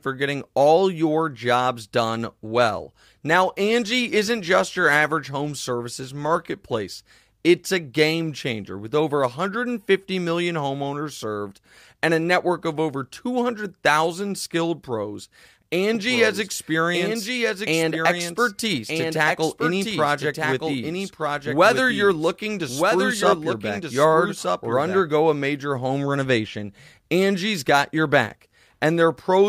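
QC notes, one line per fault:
15.95–25.01 s, doubled audio track: the likely cause is a second, slower capture path or an edit leaving two copies of the speech out of step, so a full-band duplicate runs about one second behind the original, roughly 5 dB quieter. It carries no decay or room colour, so it reads as a second, overlapping pass of the same speech rather than an echo, and it switches on and off abruptly at the edges of the range.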